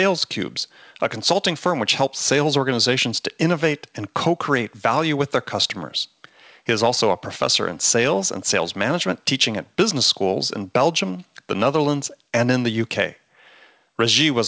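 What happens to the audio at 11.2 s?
Nothing goes wrong at 11.2 s: the speech there comes through intact, carried as usual by the call path with its band limit at 8 kHz.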